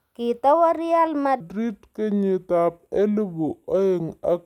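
At 1.40 s the speech drops into a section at the wrong speed, which lasts to the end of the clip at 4.46 s. Playback runs at 0.69 times the original rate. Pitch and tempo fall together. The voice turns deep and slow, about seven semitones lower. Syllables stretch out and sound heavy. The change is abrupt, not gradual. The likely cause is this stretch being played against the wrong clock.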